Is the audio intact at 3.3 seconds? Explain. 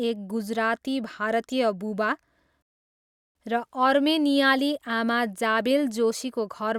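No. At 3.3 seconds the speech is in the middle of a playback stall that runs from about 2.62 to 3.35 s, roughly 0.73 s of dead silence. The sound cuts off mid-flow and then resumes. The likely cause is the player running short of data or its thread being blocked until it caught up. Unlike a brief dropout of a few milliseconds, this gap is long enough to register as a clear halt in the speech.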